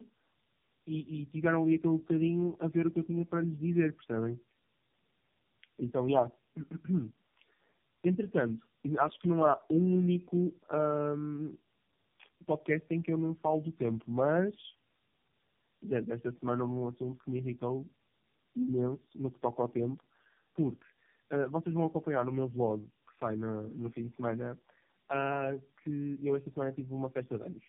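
From start to end, the speech carries tandem speech coding. It sounds like three low-rate mobile coders in a row, likely AMR-NB, with decoding between them. Each pass degrades the last. Nothing reaches above 3.5 kHz. The speech sounds muffled, rough and warbly.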